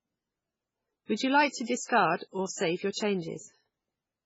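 Across the whole clip the speech sounds watery and swirly, with nothing above about 7.7 kHz and faint parts flickering in and out. That is likely heavy MP3 compression at a very low bitrate, around 16 kbps, unlike plain low-pass filtering, which dulls without swirling.

Pre-echo follows at 1.85 to 1.89 s and 2.16 to 2.21 s, both after "you like to" and before "or save your", and at 2.91 to 2.96 s after "or save your". Each is a short hiss lasting about 41 to 46 ms just ahead of a sharp onset, which then sounds softened. The codec spread noise meant for the loud attack across the quiet moment before it. Unlike a click or a dropout, the hiss sits just ahead of the attack rather than breaking the sound.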